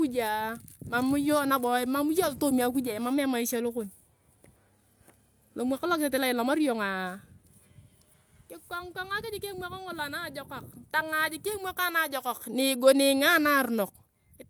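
No technical faults can be heard anywhere in the speech recording. Nothing in it calls for a timestamp or an explanation.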